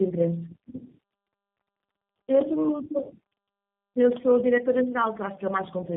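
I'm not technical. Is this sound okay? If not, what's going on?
No. The speech suffers from tandem speech coding: it passed through three phone-network compressors in a row, each re-squeezing the last's output, leaving it rough, warbly and muffled above 3.6 kHz throughout.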